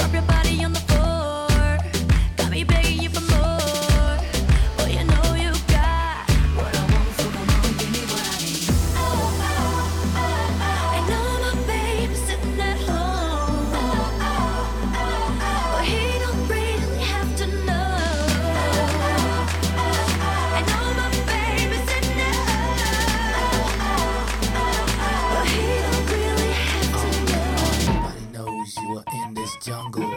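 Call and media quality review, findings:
Clock drift buffer slips, 0.87 to 29.81 s. Regular click or pop about every 1.61 s while signal is present, roughly twenty in all. Likely cause: two devices on independent clocks, so the interface buffer drifts until a block is dropped or repeated. Interval fits a clock mismatch of roughly 700 ppm and slips of around 70 samples each. Check clock sync or async resampling.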